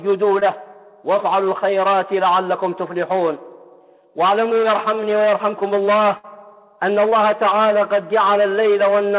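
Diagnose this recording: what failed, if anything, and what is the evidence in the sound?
Network stage, short concealed packet loss: about 20 ms of audio failed to reach the decoder in time at 0.40 to 0.43 s and again at 7.09 to 7.14 s. The receiver bridged each hole by extending the preceding sound, heard as a brief smear or wobble before the real signal resumes.

Network stage, burst of packet loss: at 6.17 to 6.25 s roughly 60 ms went missing in one run, which fits several consecutive 20 ms packets. Concealment stretched the last sound and faded it, giving a held buzz or fading hiss, and the audio resumes with that stretch gone. The band-limited G.711 sound, with nothing above 4 kHz, comes from the call path itself.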